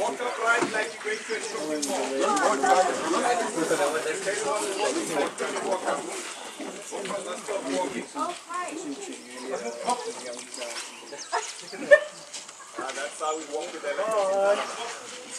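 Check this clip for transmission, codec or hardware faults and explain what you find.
Nothing stood out on listening to this clip.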